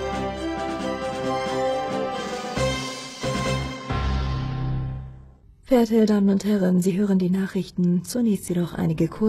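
At 3.76 s the sound switches abruptly to a lower-quality version and stays that way to the end: an adaptive stream at a lower bitrate, where a slowed connection made the player fetch a leaner encoding. Nothing above 12.3 kHz remains, the treble turns thin and synthetic, and compression artefacts rise, which fits a move from AAC-LC to HE-AAC. Unlike a buffering stall, playback never pauses or skips.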